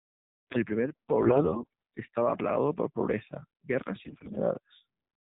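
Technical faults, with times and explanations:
Throughout: AMR narrowband mobile codec. The speech has been squeezed through the AMR-NB mobile codec, sampled at 8 kHz, so nothing above 4 kHz survives and the sound is dull and boxed-in. At 7.4 kbps the vocal-tract model is fed by only a few excitation pulses per 5 ms subframe, which makes the voice plainly buzzy and synthetic.
1.22–1.67 s and 4.04–4.36 s: AMR bit errors. The first burst ends just before "estaba plagado por pobreza" and the second comes just after "plagado por pobreza guerras". In both, the speech holds its pitch and loudness but turns hoarse, scratchy and gargly. The sound points to a weak radio link flipping roughly one bit in seven in the less protected part of each frame. The checksum on the core bits still passes, so the decoder plays the damaged frames. Their misplaced excitation pulses and slightly wrong gain and spectral values give the roughness.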